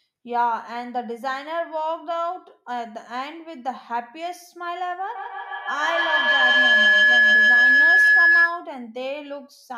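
From 5.15 to 8.68 s a feedback howl builds as sound circulates between loudspeaker and microphone, gaining level each trip. It narrows to a tone near 1.5 kHz, with repeats about every 150 ms, and peaks about 11 dB above speech. A spectrogram shows a bright horizontal line, and the waveform swells.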